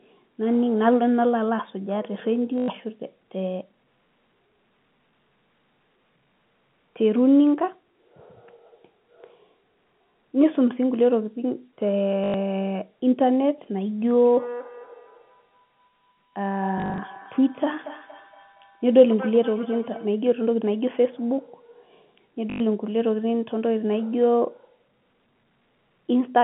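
Speech over a telephone-band line, limited to roughly 150 Hz to 3.4 kHz. Packet loss with the last packet repeated occurs at 2.58 to 2.68 s, 12.24 to 12.34 s and 22.5 to 22.6 s. Each gap is 100 ms. At 16.78 to 16.98 s, 120 ms is lost in short runs spread over 200 ms. The repeated audio buzzes robotically, which fits 20 ms packets. From 14.24 to 20.25 s there is feedback echo between two devices. Each phrase returns about a fifth of a second later, thinner and ringing, peaking about 14 dB below the speech. A second device in the room is feeding the call back into a microphone.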